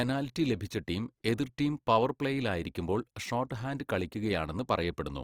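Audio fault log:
Throughout, Opus compression: the speech turns grainy and rough, its bands filled with noise or folded copies of lower bands rather than left as holes. This plainly audible damage likely comes from Opus music mode near 24 kbps, with content still reaching 20.2 kHz.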